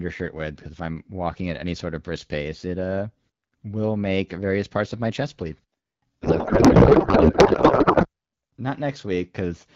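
From 6.22 to 8.07 s the speech turns into garbled, warbling noise that barely tracks it: a codec payload misread, pointing to octet-aligned AMR-WB frames read as bandwidth-efficient. Unlike dropouts or concealment, nothing goes silent; the garble runs continuously, then the clear wideband speech returns.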